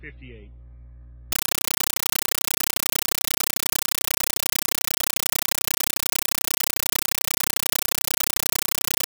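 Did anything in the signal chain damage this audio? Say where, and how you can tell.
Yes. From 1.32 s to the end, the sound becomes loud, chattering static, a compressed stream played as audio at the playback link. Undecoded AC-3 frames arrive as raw samples: 8 ms noise bursts with zero padding between, repeating 31.25 times a second. That strict rhythm distinguishes it from random digital noise.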